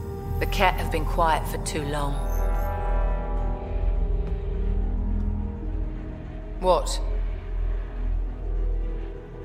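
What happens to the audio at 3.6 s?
Nothing goes wrong at 3.6 s; the audio plays through that moment intact, with no dropout, click, glitch or other fault.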